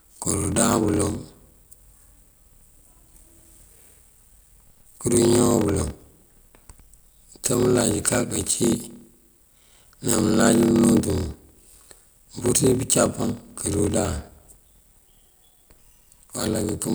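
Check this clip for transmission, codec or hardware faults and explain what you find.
One fault runs through the whole speech clip: a block size mismatch (padded). Each written block falls short of the block read next, which fits 1024-sample writes, and zero padding fills the rest. The short gaps form a 38.3 Hz buzz, and the speech runs at 0.889 times normal speed. A waveform shows regular flat silent slivers, and a spectrogram shows thin vertical gaps.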